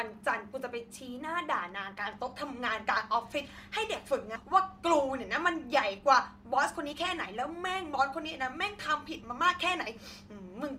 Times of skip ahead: 4.35-4.45

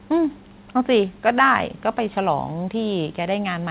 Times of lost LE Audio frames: none

